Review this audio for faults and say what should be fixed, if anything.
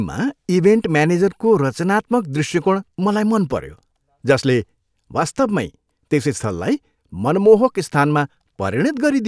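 Nothing to fix: no faults heard anywhere in the clip.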